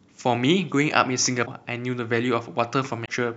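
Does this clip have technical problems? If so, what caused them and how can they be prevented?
Yes. At 1.45 to 1.48 s and again at 3.05 to 3.09 s the speech skips forward and a brief glitch of about 30 to 40 ms fills the seam. This is likely a broken MP3 bit reservoir. Frames about 26 ms long went missing, so the frame after each cut reached back for data it had borrowed and decoded bytes from the wrong frame. A plain dropout would leave clean silence, but here there is a jump in time. To prevent it, cut or splice MP3 only at frame boundaries with reservoir-aware tools, or edit a lossless source and encode afterwards.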